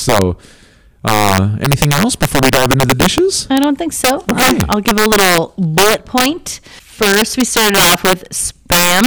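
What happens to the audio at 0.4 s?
At 0.4 s the loudest peaks of the speech break into harsh, violent cracks, far sharper than ordinary clipping. This is integer overflow, present throughout the clip: the signal is driven about 8 dB too hot, and the few percent of samples that pass the integer limit wrap to the opposite sign instead of being held there.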